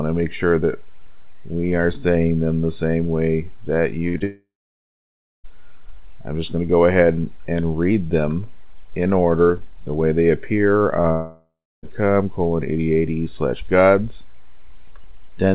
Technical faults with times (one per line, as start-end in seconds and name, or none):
4.08-4.16 burst of packet loss
4.18-4.22 short concealed packet loss
4.24-5.46 long network dropout
11.02-11.06 short concealed packet loss
11.12-11.85 long network dropout